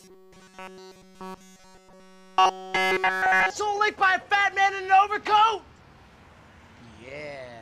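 From 0.01 s to 3.50 s the sound becomes a rigid, metallic buzz fixed at 188 Hz, robotic sound from repeated short buffers. Audio likely arrived too seldom, so a roughly 5.3 ms slice was looped continuously in place of the skipped material.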